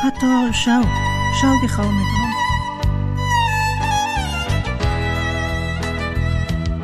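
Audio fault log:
No faults heard.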